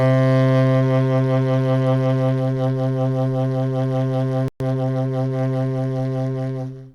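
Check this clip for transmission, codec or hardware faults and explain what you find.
Two linked playback faults interrupt the music.

Playback stall, 4.48 to 4.60 s: the music cuts to silence for 120 ms in mid-flow. The likely cause is the player running out of buffered data or its output thread being blocked, so nothing reached the output until it recovered.

Time-compressed catch-up, 4.60 to 5.08 s: once output resumes, the player clears its backlog by removing small slices and cross-fading the joins, running at about 1.25 times normal speed. The music sounds hurried but keeps its pitch.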